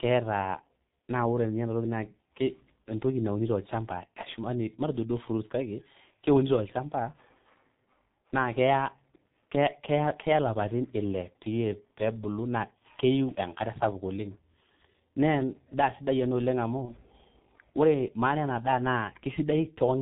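The speech throughout sounds muffled and hoarse, with consonants smeared and nothing bright above the low band. That is the signature of the G.723.1 codec, heavily damaged here: its 30 ms frames and very low data rate, consistent with about 6.3 kbit/s, discard everything above 4 kHz and let the vocal model trail behind fast changes in the voice, so articulation blurs into a rough, dull tone. At 16.85 s a brief stretched, fading sound replaces the speech, and the voice stays weak or distorted until about 16.93 s. This is VoIP packet loss concealed by the speech codec. The gap fits a single lost 30 ms frame. The decoder filled it by repeating its last pitch and filter with falling gain, and because each frame builds on the previous one, the distortion lingers briefly after packets resume.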